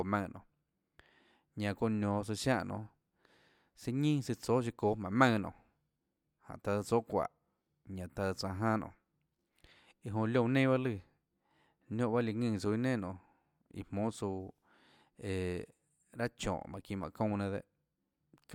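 Listening to the speech recording, nothing stood out as a technical problem at any point.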